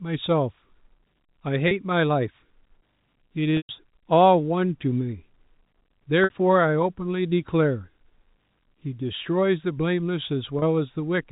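At 1.68, 3.57, 6.24 and 10.59 s, packet loss with pitch repetition breaks into the speech. Audio went missing and the receiver filled each hole by looping the last pitch cycle. The gaps at 1.68 and 10.59 s last 30 ms, which fits a single lost packet, and sound like a brief buzzy hold. The 60 ms gap at 6.24 s and the 120 ms gap at 3.57 s stretch further, fading toward silence before the speech blends back, all within the narrow telephone band of G.711 coding.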